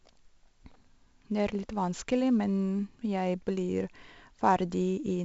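From start to end, the speech carries 4-bit ADPCM compression damage. Gritty hiss tracks every loud syllable, attacks distort, and nothing sounds above 7.7 kHz, suggesting 16 kHz sampling.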